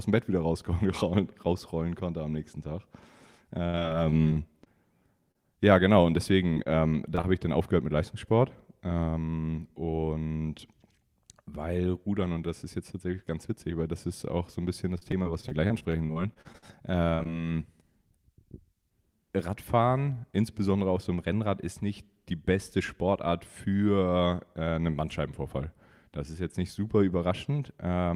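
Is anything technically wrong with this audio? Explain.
Yes, there are two kinds of fault.

Repeated packet loss (robotic sound) occurs at 3.63 to 5.37 s, at 6.55 to 7.25 s just before "habe ich dann aufgehört", and at 14.98 to 17.27 s after "auch so ein bisschen". Packets kept arriving lost or late, and each gap was patched by extending the preceding sound. Up to about 17% of a stretch is concealed, with gaps as long as 70 ms. The result is choppy speech with pieces missing.

A jitter buffer speed-up occurs at 9.20 to 10.26 s and at 18.90 to 19.81 s, ending before "insbesondere auf so einem". The receiver had too much audio buffered, so it trimmed short pitch-period chunks, around 50 ms in total each time. Playback runs at 104% speed with unchanged pitch.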